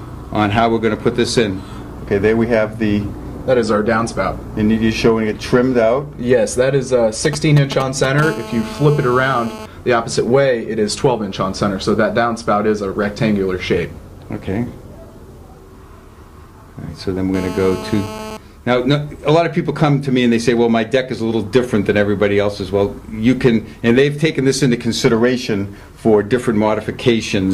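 A nearby 2G phone begins signalling at 7.25 s, and the audio circuit rectifies its short groups of radio bursts until 8.21 s. The result is GSM signalling bursts: a galloping dit-dit-dit of brief 217 Hz buzzes, only a few decibels below the sound itself.

From 8.22 to 9.66 s, and again from 17.34 to 18.37 s, the phone transmits continuously as in a call, pulsing 217 times a second. Rectified, this becomes GSM phone buzz, a hard, raspy 217 Hz tone rich in harmonics, unrelated to the audio, at about 13 dB and then about 12 dB below it.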